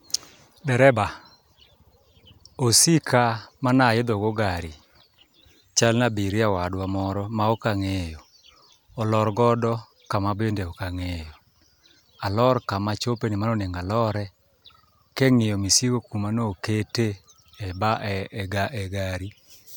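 No dropouts, clicks, distortion or other technical faults turn up anywhere in the speech.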